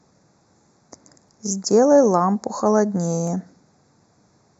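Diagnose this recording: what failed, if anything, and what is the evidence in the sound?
Channel delay (comb filtering) runs through the whole recording. One channel lags the other by about 0.15 ms before the mono sum, so cancellation cuts notches starting near 3 kHz and repeating at evenly spaced intervals above it. The speech sounds hollow and phasey, and a spectrogram shows fixed horizontal dark bands.

Two abrupt skips fall at 1.29 s and 3.27 s, each losing roughly 10 ms, with the sides butted together without silence. They are about 2 s apart, likely audio missing between chunks at a buffer or file-write boundary. The waveform shows a discontinuity, and the spectrogram shows a thin vertical seam.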